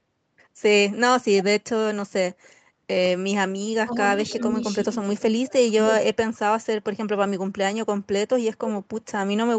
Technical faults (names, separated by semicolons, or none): speech suppressed in double talk; echo leak